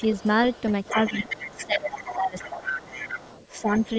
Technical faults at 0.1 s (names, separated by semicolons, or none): other side's voice leaking through